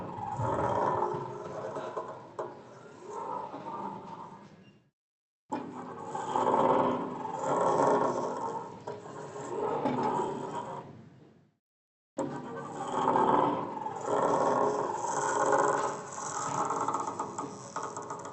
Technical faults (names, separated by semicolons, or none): none